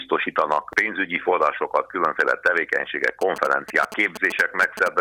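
A short sound clip with GSM signalling bursts from 3.21 s to 4.88 s. A galloping dit-dit-dit pattern of short buzzes cuts in, sitting about 10 dB below the main sound. The buzz repeats at 217 Hz, the frame rate of 2G mobile transmission. A nearby phone is sending brief radio bursts while signalling, not carrying a call. Some part of the audio circuit rectifies that radio energy. The burst envelope then turns into audible interference.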